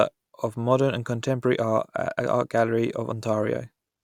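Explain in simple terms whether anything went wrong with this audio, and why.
Nothing went wrong with this speech recording that a listener can pick out. The sound carries on steadily from beginning to end, with no moment where it jumps, stops or changes unexpectedly.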